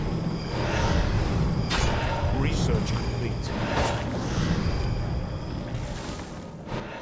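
No fault is audible anywhere in the clip; nothing to report.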